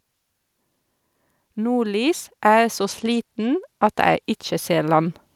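A speech recording with two overlapping faults. From 1.55 s to 5.15 s the level climbs by about 5 dB. The voice and the background noise swell together over several seconds, which marks it as automatic gain rising: the gain control judged the input too quiet and kept turning it up. A talker moving closer or speaking louder would raise the voice alone, not the noise floor with it.

From 2.79 s to 4.24 s there is a Bluetooth SBC bit pool drop. The treble dulls and a gritty, grainy noise rides on the speech, then clears when the rate recovers. The sound fits the phone cutting the bit pool from about 31 to 14, near 99 kbps, on a congested link, starving the top sub-bands and quantising the rest coarsely. Unlike a plain low-pass filter, the loss of highs here comes with added grit, and it lasts only as long as the congestion.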